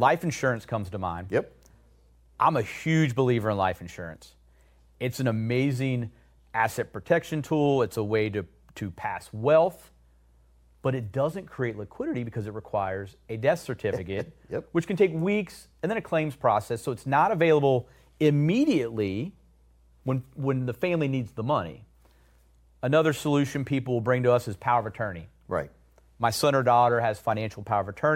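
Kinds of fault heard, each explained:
No faults detected across the speech; nothing to list.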